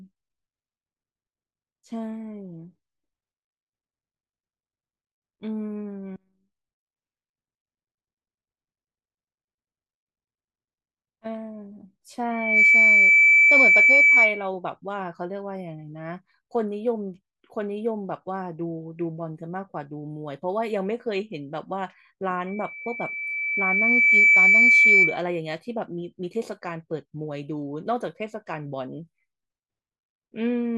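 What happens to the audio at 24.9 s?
At 24.9 s you're right inside a loudspeaker feedback squeal running from 22.46 to 25.23 s. The mic is hearing its own speaker, and a 2.3 kHz tone keeps feeding round the loop, swelling over roughly two seconds to sit about 15 dB above the speech.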